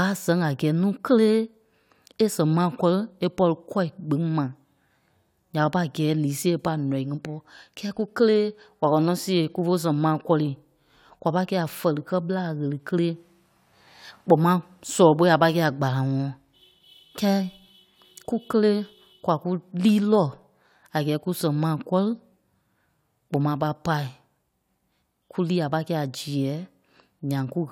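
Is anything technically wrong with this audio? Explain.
No, there are no technical faults.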